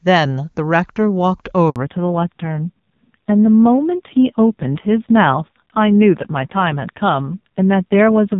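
At 1.70 s the speech cuts out in a handover gap lasting about 60 ms, until 1.76 s. The call was passed from one network to another and no speech frames arrived while the link switched, so the sound falls away almost at once and nothing replaces it. On a waveform this appears as a short flat stretch. On a spectrogram it is a narrow, fully blank vertical band across all frequencies.

From 1.76 s to the end, a fallback to narrowband follows. Before the gap the HD Voice wideband codec carries energy well above 4 kHz. Afterwards nothing remains above 4 kHz, and the speech turns muffled, dull and somewhat rough and raspy, which fits a low-rate narrowband mode around 6 kbit/s. On a spectrogram the upper region goes abruptly and permanently empty, leaving a hard ceiling at 4 kHz from that point onward.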